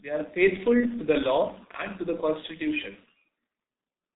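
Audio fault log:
Throughout: G.723.1 codec. The speech is heavily muffled and hoarse, with smeared consonants, because the roughly 6.3 kbit/s coder discards everything above 4 kHz and updates its voice model slowly. On a spectrogram, energy stops flat at 4 kHz and the formant bands look blocky.
0.80–0.85 s: VoIP packet loss concealed by the speech codec. Right after "are faithful", one 30 ms frame is lost and the decoder repeats its last pitch and filter at lower gain, giving a brief fade before "the law and to". The waveform shows a short dip.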